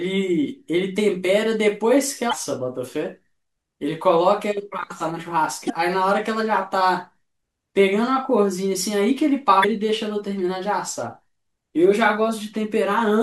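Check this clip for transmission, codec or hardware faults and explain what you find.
Three short faults of one kind turn up in the speech. Damaged data in a compressed stream occurs at 2.29 to 2.33 s, 5.66 to 5.70 s and 9.60 to 9.65 s, each lasting roughly 45 ms. At those points bytes in the encoded stream were corrupted, so the decoder reads garbage as audio frames, loses its place and hunts for the next valid frame header before normal decoding resumes. Each event is a brief chirp, squawk, click or short hole cutting into the speech.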